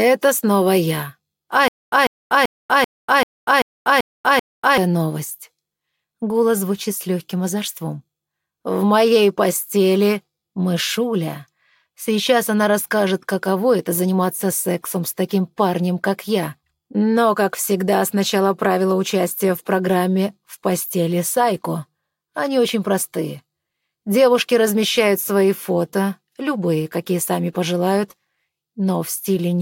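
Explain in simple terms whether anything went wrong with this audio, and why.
From 1.68 to 4.78 s there's a stutter with silent gaps: a 145 ms snippet plays eight times, each followed by 242 ms of dead silence. Playback likely stalled and kept replaying its last fragment, so the real audio for that stretch is lost.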